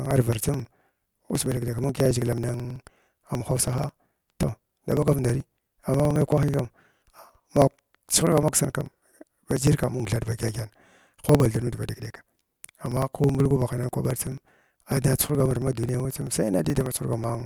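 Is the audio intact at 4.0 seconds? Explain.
No. At 4.0 seconds the speech falls inside a run of periodic USB or driver dropouts that lasts from 0.06 s to 17.4 s. Every 54 ms something blocks the audio path and roughly 10 ms of sound is skipped, not filled with silence, so the signal jumps forward with a tick that is heard only while speech is present. What sets this apart from random packet loss or stray clicks is its clockwork regularity, about 18 ticks per second.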